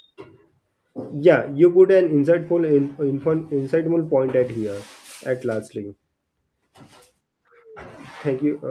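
The speech in this clip carries no audible technical faults at any point.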